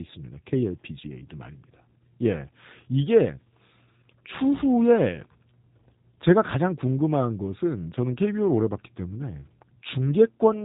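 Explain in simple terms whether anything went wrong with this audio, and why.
The speech passed through a G.729 codec, a low-bandwidth phone codec that rebuilds the voice from a simplified model, so it sounds muffled, slightly rough and synthetic throughout.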